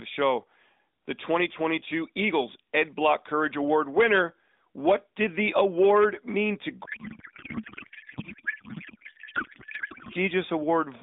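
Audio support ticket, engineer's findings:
Speech dissolves into garbled noise and warble barely tracking the talker, 6.86–10.16 s, right after "the award mean to". Codec payload misread: receiver unpacking AMR narrowband frames in the wrong layout, consistent with octet-aligned payload parsed as bandwidth-efficient. Line band roughly 0.2–3.7 kHz, codec in 12.2 kbps mode.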